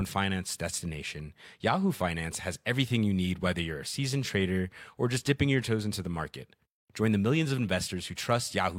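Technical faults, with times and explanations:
No technical faults are heard in this speech clip.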